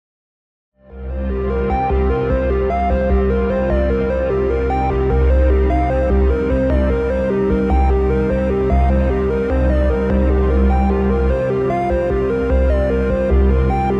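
No technical faults can be heard; the level simply rises in a smooth, editor-style fade-in from about half a second to 1.88 s.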